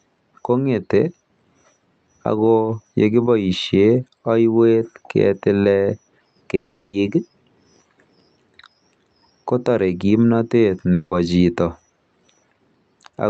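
From 6.55 to 6.95 s the speech breaks off and is replaced by a fading buzzy continuation of the last sound, with no true silence, before resuming further on with about 380 ms of material lost. A shorter gap of the same kind runs from 10.93 to 11.13 s, about 180 ms concealed. Both point to a long network dropout, likely, with the receiver filling the gap rather than the audio simply stopping. Throughout, the Opus call path limits the band to 8 kHz.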